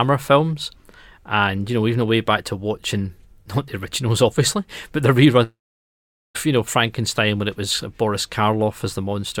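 At 5.43 s the sound breaks off, and a long network dropout runs until about 6.37 s. The receiver first stretches the last sound into a buzzy tail that fades quickly. About 0.81 s of silence follows. The cause is likely a stall in packet delivery, with the receiver papering over the hole. Roughly 0.92 s of audio never arrives. When playback resumes, it picks up further on, and that stretch is simply missing.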